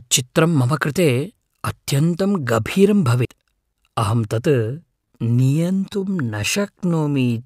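CD skip at 3.25 s, right after "अत्यन्तं गभीरं": the player's laser lost its track and landed on a different turn of the disc's spiral, so playback mutes for a moment, a couple of milliseconds here, and then resumes from another point in the recording. It is heard as a small tick followed by an abrupt discontinuity, with the speech picking up somewhere other than where it left off rather than flowing on.

Time-stretched section from 4.46 s to the end: the speech is slowed to about 0.68 times its original pace while its pitch stays where it was. The likely cause is software lengthening the audio to fill a set duration, keeping pitch steady by repeating short fragments of the waveform. The slowed speech drags, and the drop in tempo at 4.46 s is sudden.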